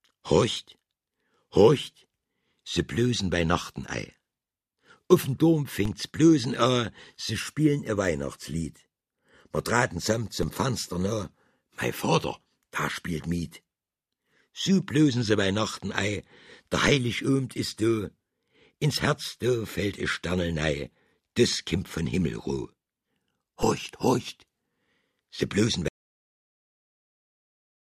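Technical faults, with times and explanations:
5.85 s, 10.43 s and 23.63 s: DC step, the waveform's zero line jumps abruptly and then decays away through a roughly 20 Hz high-pass, each heard as a low thump.
25.88 s: cut-off end, the final buffers never reached the output, so the audio stops mid-sound and drops straight to digital silence with no decay.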